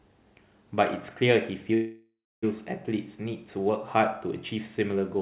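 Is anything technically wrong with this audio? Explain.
Yes. From 1.74 to 2.45 s there is a call audio freeze. The likely cause is delayed packets draining the jitter buffer. The last sound continues as a fading buzz, ending in about 300 ms of silence. The audio then resumes where it stopped, so nothing is lost, but everything after it arrives about 685 ms late. On a waveform this shows as a decaying smear, then a flat line. On a spectrogram it shows as a blurred, fading band, then an empty gap. The whole clip also has nothing above 4 kHz, which fits narrowband telephone coding.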